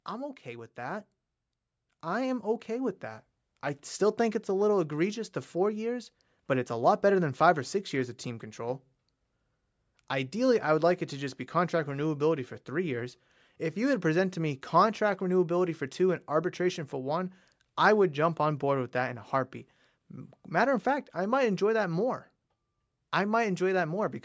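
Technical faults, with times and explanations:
0.43 to 10.1 s, automatic gain rising: the speech and the background noise beneath it swell together, climbing by about 9 dB over nearly ten seconds instead of holding a steady level. The automatic gain control judged the input too quiet and kept turning its gain up step by step, so everything in the signal grows louder at once, and the quiet noise floor rises right along with the voice, with the bandwidth of the call microphone path topping out around 8 kHz.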